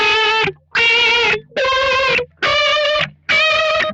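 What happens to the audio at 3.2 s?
Sound cut by the noise suppressor, from 3.12 to 3.28 s. The suppressor mistakes this stretch for noise and pulls it down by up to about 12 dB, so its sustained or fading part sinks and its tail is clipped short while any sharp onset survives.

This dip sits within a wider problem: a noise suppressor meant for speech is applied to non-speech sound across the whole clip. It keeps nudging steady material and ambience down by around 5 dB, which gives the level a pumping, thinned quality around this moment as well.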